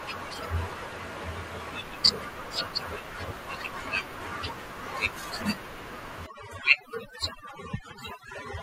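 From 6.26 s to the end, overdone noise removal sets in. Bands near the noise floor are gated away, leaving twinkling specks. The room noise sits about 19 dB below.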